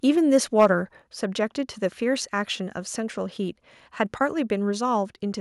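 From 0.59 to 0.66 s the loudest stretch of speech turns harsh and crackly, the peaks flattened against a hard ceiling. That is microphone overload, likely from input gain set about 4 dB too hot, squaring off around a tenth of the samples. Unlike codec distortion, it tracks the loudness directly.

At 1.02 s the level of both voice and background falls by about 5 dB in a single step and stays down: microphone volume stepped down, likely the call software reacting to the overload. A fade or compressor would ramp gradually, and this step doesn't recover.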